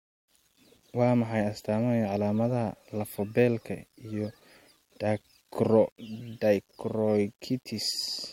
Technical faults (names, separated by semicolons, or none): low bit depth without dither